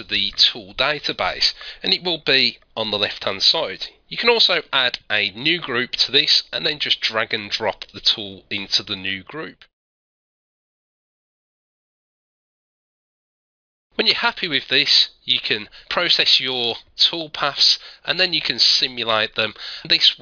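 No technical faults can be heard anywhere in the signal.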